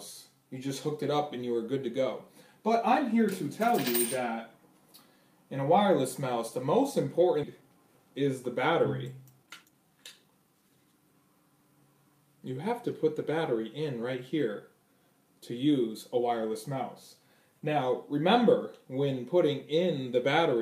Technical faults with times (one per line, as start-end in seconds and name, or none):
7.43 skip ahead
7.60-11.14 jitter buffer speed-up